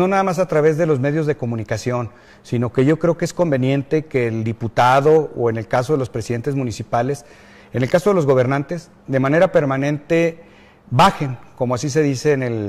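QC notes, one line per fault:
No technical faults are audible in the signal, and the level and playback remain steady across the clip.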